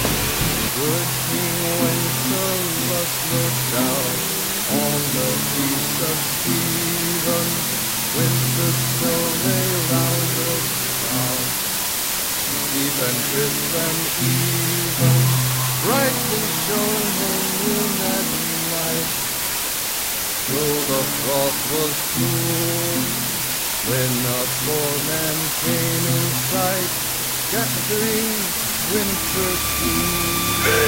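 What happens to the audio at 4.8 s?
At 4.8 s the audio sits under a steady, even hiss from low bit depth with dither, present throughout rather than starting there. Only about 3 bits are used, and dither added before rounding turns the coarse quantisation error into broadband white noise roughly as loud as the sound itself, with no grainy distortion. A spectrogram shows a uniform noise floor filling every frequency across the clip, and the waveform carries a thick, constant fuzz around the signal.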